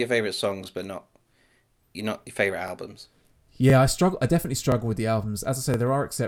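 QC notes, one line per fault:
0.64–0.66, 1.66–1.68, 2.68–2.70, 3.70–3.72, 4.72–4.74 and 5.74–5.76 s: overlapping chunks. Each new chunk of about 1.0 s begins early, so 20 ms plays twice, giving a regular click or stutter, for example between "but not" and "you not your favorite".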